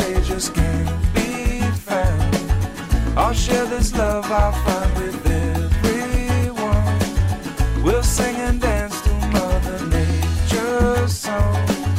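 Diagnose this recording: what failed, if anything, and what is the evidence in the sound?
No fault detected anywhere.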